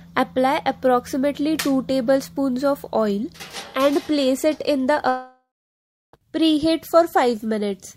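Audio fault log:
5.08–6.14 s, long network dropout: the last sound smears into a fading buzz, then about 0.66 s of silence, and audio resumes further on with about 1.05 s gone. This is likely a stalled stream the receiver tried to cover, not brief packet-loss glitches.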